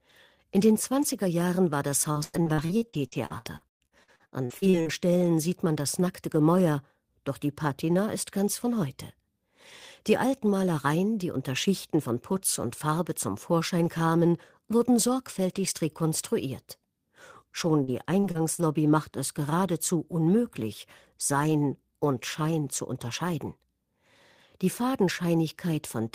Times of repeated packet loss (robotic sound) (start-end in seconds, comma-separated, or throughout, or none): 2.11-4.88, 17.84-18.69